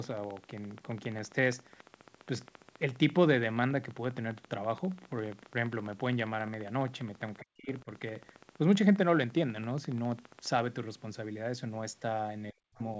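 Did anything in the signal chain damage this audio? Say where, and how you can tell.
Yes. A train of clicks runs from 0.04 s to 10.6 s, at a steady 14.8 per second, about 150 in all, with peaks that rise a little above the speech. They keep ticking through the pauses. On a waveform they show as evenly spaced spikes. On a spectrogram they appear as thin vertical lines running up to the 8 kHz ceiling of the G.722 call path. The evenness points to the analogue wiring or interface, most likely interference or a faulty connection or power supply injecting a pulse each cycle.

Speech suppressed in double talk occurs at 7.4 to 7.89 s and again at 12.52 to 12.79 s. In each, the level falls by something like 40 dB for a few hundred milliseconds. On the waveform the envelope collapses abruptly. On a spectrogram the whole band goes dark, then recovers. This is call processing. The echo canceller likely could not tell the talker from the loudspeaker echo while both sides spoke, so it turned everything down.

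The other side's voice leaking through is a brief scrap at 12.75 to 12.8 s, very faint, roughly 35 dB under the talker. It comes right as the second suppression ends. On a spectrogram it would be a faint, patchy harmonic trace sitting in the suppressed gap. It also comes from the call-processing stage, where residual loudspeaker pickup was likely left in the microphone signal by an echo canceller that did not fully remove it.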